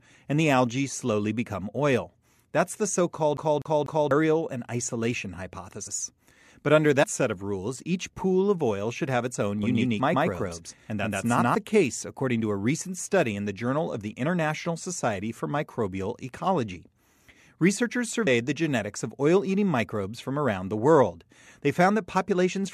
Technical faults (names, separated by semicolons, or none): CD stuck on one turn; compressed frames skipped; doubled audio track